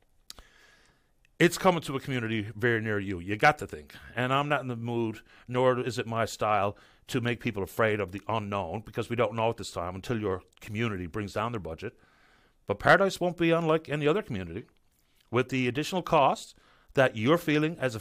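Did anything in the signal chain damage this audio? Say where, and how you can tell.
No, nothing in the signal chain damaged this audio.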